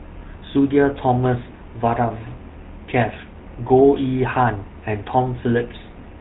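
Throughout, the speech carries GSM full-rate codec damage: pulse-driven excitation gives a buzzy, gravelly roughness, unlike plain telephone band-limiting, which just cuts everything above 4 kHz.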